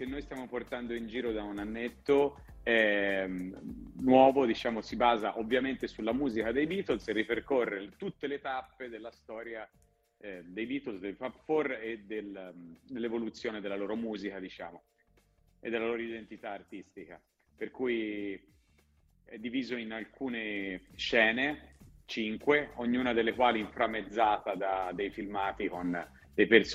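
Zipper noise: the gain moves in unsmoothed 1 dB steps, around fifteen a second, and each jump clicks. A fast ticking rides on the audio from 7.38 to 8.19 s as the level falls about 10 dB, and from 20.42 to 21.04 s as it rises again.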